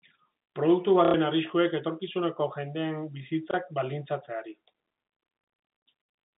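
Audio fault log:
1.05 to 1.14 s and 3.51 to 3.54 s, packet loss with last packet repeated: a brief robotic stutter, longer at 1.05 s, then a small blip at 3.51 s. Lost audio was filled by replaying the previous chunk, about 90 ms then 30 ms, which fits 30 ms packets and a rough 33 Hz buzz.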